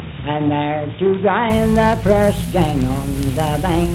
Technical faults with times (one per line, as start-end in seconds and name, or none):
0.00-1.50 input switched to a poorer device